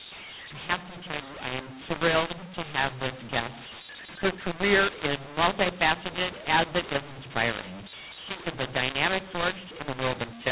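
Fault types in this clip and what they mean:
mu-law and A-law mixed up: The speech sounds harsh and gritty throughout, with pauses hissing with raised noise. The telephone audio was coded with G.711 mu-law but decoded as A-law, so every sample level is mapped to the wrong value.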